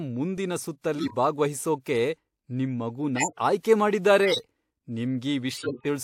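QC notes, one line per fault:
0.98–1.14 s, 3.16–3.40 s, 4.23–4.45 s, 5.51–5.86 s: corrupt frame decoded. Damaged compressed frames were played anyway, so misread gains and codes put energy at wrong frequencies. Each error peaks around -10 to -15 dBFS and lasts roughly three to seven frames.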